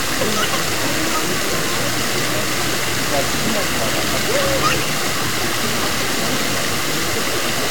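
From the start to the end, the whole recording has a coarse, grainy distortion that rises and falls with the sound itself. Quiet sounds turn gritty, and the quietest stretches break up into sputtering or drop out altogether. The likely cause is low bit depth without dither: the samples were truncated to very few levels, which fits a 4-bit signal. Without dither, the error is tied to the signal and sits only around ten decibels below it. A waveform view shows a staircase of flat steps, and a spectrogram shows a dense haze of harmonics over every sound, vanishing in the quietest parts.

At 0.21 s, 3.11 s and 7.12 s there are brief, sharp blips. These come from damaged data in a compressed stream. At each point, corrupted frames made the decoder misread them, lose sync and skip ahead to the next frame header. Each blip is a short glitch. A spectrogram shows thin vertical broadband streaks at those times, and the waveform shows an abrupt discontinuity.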